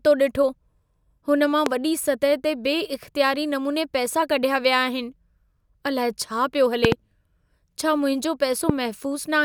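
Three loud pops jump out of the speech, each roughly 20 dB above it: one at 1.66–1.69 s after "हुन मां", a double pop at 6.85–6.94 s after "अलाए छा पियो", and one at 8.69–8.72 s after "छा मुंहिंजो". They're likely voltage spikes from a plug, switch or static, and the speech carries on underneath.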